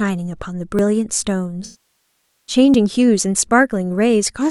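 Audio missing between chunks, at 0.79 s: a small skip where a sliver of the speech, around 20 ms, vanishes and the two sides butt together with no gap. This is likely a recorder working in 1 s chunks and dropping a moment at each handover.

AAC frame loss with concealment, from 1.64 to 2.55 s: about 0.85 s of the stream is gone, which fits a run of roughly 40 lost frames. The decoder patches the hole from the last good spectrum, so the sound smears into a noisy, phasey wash, decays toward silence, then fades back in.

The same chunk-boundary skips return at 2.74 s and 3.72 s, each a tiny clipped-out slice with the audio joined straight across. Their one-second spacing from 0.79 s matches the chunk period, with the skip expected near 1.7 s hidden inside the concealed stretch.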